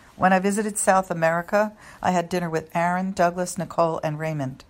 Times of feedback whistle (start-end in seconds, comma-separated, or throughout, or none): none